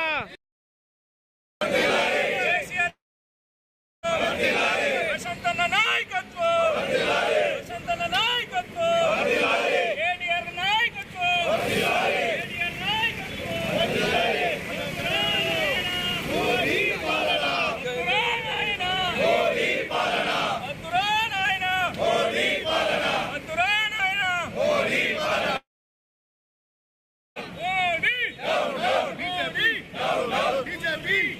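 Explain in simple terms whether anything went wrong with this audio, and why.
Two gaps interrupt the audio, from 2.89 to 4.06 seconds and from 25.57 to 27.39 seconds. Each begins with a short fading buzz carrying on the last sound. Then there is silence for about one second the first time and nearly two seconds the second time. The audio then picks up later, and the missing part never comes back. This is likely a long network dropout, where the audio stopped arriving for a while.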